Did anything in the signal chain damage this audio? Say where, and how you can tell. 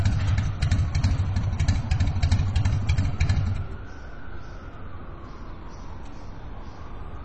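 Yes, at the codec stage, throughout the whole clip. The audio has nothing above 9.5 kHz, and two different kinds of coding damage are audible together: a smeared, swirly texture typical of low-rate MP3, plus the metallic, synthetic top end of HE-AAC's spectral band replication. The likely cause is transcoding between lossy codecs, which fits a low-rate MP3 file later re-encoded to HE-AAC at a similarly low rate. A single encode would produce only one artefact signature. Here each encoder's faults are layered on the other's.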